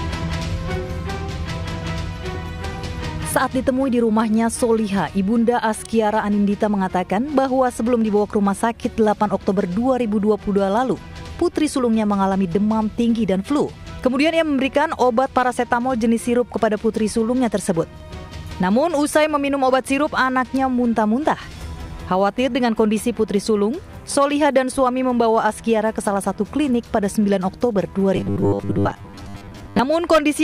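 Sample clock jitter runs through the whole recording: the converter's timing wanders by something like a microsecond and a half, adding a hiss-like roughness roughly 40 dB below the signal that grows on loud, bright passages and disappears in silence. From 28.16 to 29.79 s the audio collapses into a rigid metallic buzz at 100 Hz, the robotic sound from repeated short buffers. A 100 Hz buzz matches a 10 ms block being replayed, and most of the audio in that stretch seems to be replaced by these repeats, likely because new data was arriving too late.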